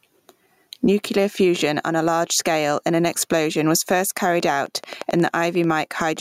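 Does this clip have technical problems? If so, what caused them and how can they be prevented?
Yes. Gain pumping runs through the whole speech clip: the gain swings by roughly 15 dB, clamping down each time the speech gets loud, leaving the speech squashed. This is likely due to a microphone gain set far too high, with a fast limiter or compressor repeatedly clamping it down. On a waveform the envelope looks flattened, with loud and soft parts closer in level. Setting the input gain so peaks sit well below the limiter threshold prevents it.

A train of clicks starts just after "an explosion was first", running from 4.40 s to 6.18 s: about twenty sharp ticks at a regular 11.3 per second, each about as loud as the speech itself and audible in pauses too. The likely cause is interference from nearby equipment or a faulty connection or power supply, injecting the same pulse over and over. A waveform shows evenly spaced narrow spikes; a spectrogram shows thin vertical lines across all frequencies. 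Moving interfering devices away from the setup and checking cables and the power supply prevents it.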